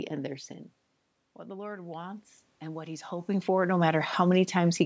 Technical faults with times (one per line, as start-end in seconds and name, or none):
1.48-4.47 automatic gain rising